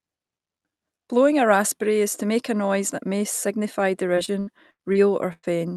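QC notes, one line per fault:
4.15–5.45 s, repeated packet loss (robotic sound): six holes, longest 101 ms, each patched by stretching the preceding sound, so about a quarter of the span turns choppy. The clustered, recurring gaps, not one dropout, distinguish it from isolated loss.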